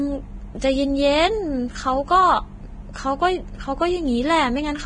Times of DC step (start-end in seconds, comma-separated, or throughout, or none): none